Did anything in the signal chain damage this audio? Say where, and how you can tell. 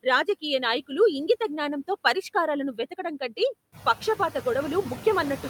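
Yes. Call processing applied a noise suppressor throughout, cutting steady noise by about 14 dB frame by frame. The noise sinks in pauses and swells under speech, clearest after the room noise rises about 14 dB around three and a half seconds.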